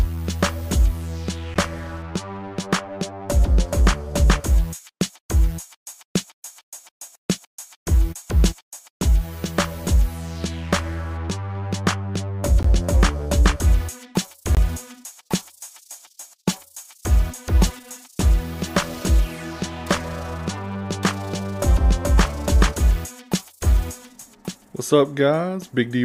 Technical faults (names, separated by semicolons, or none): block of digital silence